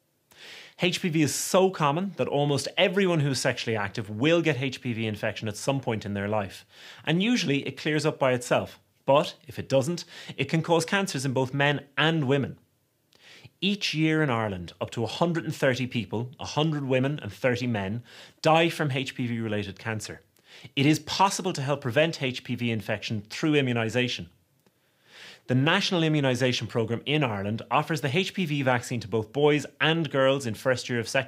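No technical faults can be heard anywhere in this audio.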